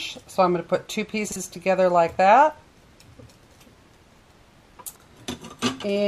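At 1.28 s, a 40 ms chunk of audio was delivered late and played one chunk after its proper place, so the chunks out of order jumble the sound through 1.36 s. At 4.84 s the same fault recurs with a chunk held back by three 40 ms chunks, scrambling the audio until 5.0 s. Nothing is lost in either case, but the misplaced chunk creates three hard joins, heard as a brief garbled moment.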